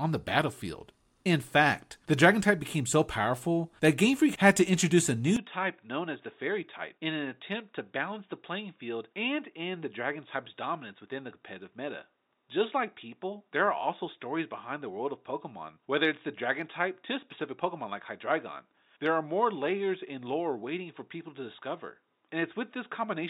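At 5.36 s, right after "had to introduce a", the speech abruptly turns duller and boxier and stays that way to the end. Nothing above 3.8 kHz gets through, the level drops by about 5 dB, and a faint new background noise appears well below the speech. There is no gap at the changeover. This is likely an input switched to a poorer device, such as a different microphone or a headset's narrowband call profile.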